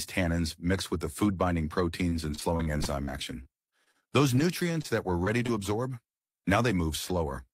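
From 2.09 to 4.86 s there's repeated packet loss, the robotic kind: short chunks keep going missing, the longest about 42 ms, and each hole gets patched by stretching the last bit of sound. The holes come so close together that it turns choppy, with pieces missing.

Then at 5.24 s and again at 5.46 s there's short concealed packet loss, each hole about 20 ms. The receiver papers over it by continuing what came just before and then blending back, so you hear a quick smear or wobble.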